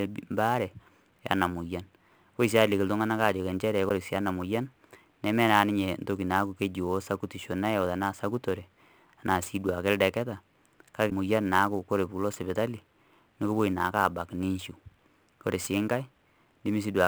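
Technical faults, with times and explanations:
Throughout: sample clock jitter. A fine hiss and roughness rides on the speech and swells on loud, bright sounds, then disappears in pauses. The converter's timing wanders by around 10 microseconds, leaving an error about 25 dB below the signal that follows the signal rather than sitting steady like ordinary noise.
3.88–3.91 s and 11.09–11.12 s: broken MP3 bit reservoir. Each spot lasts roughly one 26 ms frame, and the sound jumps ahead. The likely cause is a frame that reached back into the reservoir and decoded another frame's bytes.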